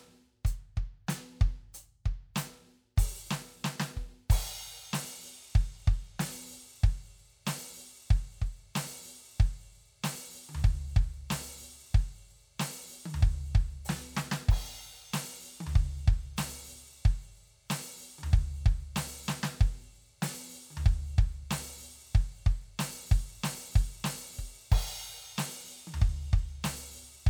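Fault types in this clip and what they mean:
Nothing to flag here, the music comes through without any technical fault to describe.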